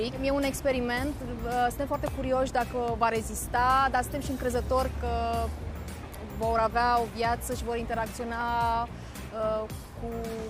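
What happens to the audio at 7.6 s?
Nothing goes wrong at 7.6 s; the audio plays through that moment intact, with no dropout, click or other fault.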